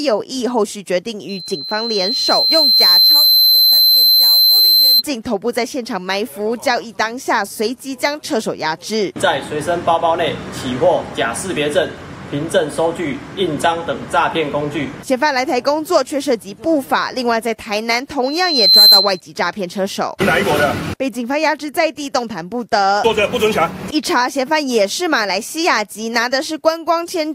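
At 1.29 s a loudspeaker feedback squeal begins: a pure tone near 4.1 kHz swells over roughly two seconds until it sits around 10 dB above the programme, then stops at 5.03 s. It returns at 18.24 s, building in about half a second and ending at 19.20 s. A microphone is hearing its own loudspeaker, and the loop gain at 4.1 kHz exceeds one. A spectrogram shows a thin, brightening horizontal line; the waveform envelope visibly bulges.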